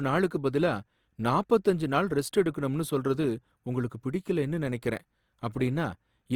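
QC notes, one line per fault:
Throughout, Opus compression: the speech is plainly grainy and rough, its detail turned to a noisy fizz with less swirl than MP3, though the band reaches about 20.3 kHz. The likely cause is Opus in CELT mode filling starved bands with noise, which fits 24 kbps.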